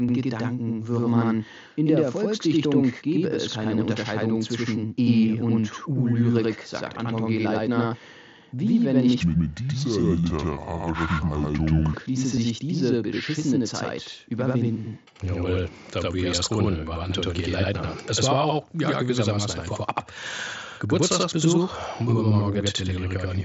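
Channel delay (doubling) runs through the whole clip. One channel arrives about 85.33 ms after the other, which fits a 4096-sample buffer, and once the two are summed to mono the late copy sits beside the original at equal level, so every syllable has a short slap-back twin.

Concealed Bluetooth headset packet loss occurs at 1.36 s. A single 7.5 ms frame went missing between headset and phone, and the receiver filled the gap by repeating the closest-matching stretch of the preceding waveform. The patch is nearly invisible, nearly hidden in the mSBC-coded speech.

A section at the wrong speed runs from 9.21 to 11.94 s. It plays at 0.673 times its recorded rate, so pitch and tempo fall together and the speech becomes deep and dragged, about seven semitones low. The likely cause is an editor or player applying the wrong clock to that stretch.

The same concealed Bluetooth headset packet loss occurs again at 12.36 s: another lone 7.5 ms frame was replaced by waveform continuation, leaving the repair nearly hidden.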